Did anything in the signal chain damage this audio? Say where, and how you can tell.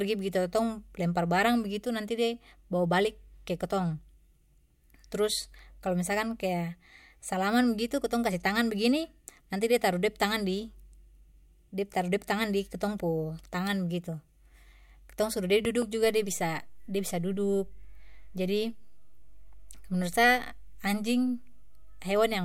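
Yes. A loud pop, a double pop between 15.65 and 15.84 s about 10 dB above the speech, points to a likely transient in the analogue wiring, such as a plug or switch.

A DC step at 16.05 s, about -41 dBFS, gives a low thump. The offset then holds to the end, suggesting the converter shifted its zero line while the speech continued.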